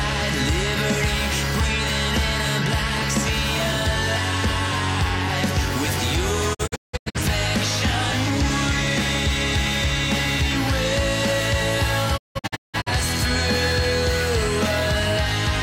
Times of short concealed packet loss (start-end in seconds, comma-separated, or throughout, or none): none